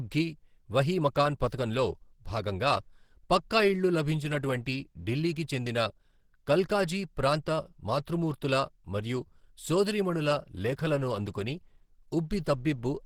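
Throughout, the speech sounds muffled, hoarse and grainy, most likely from Opus compression in its hybrid mode at a low bitrate of around 16 kbps.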